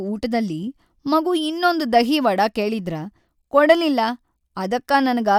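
Speech recording with no audible technical faults.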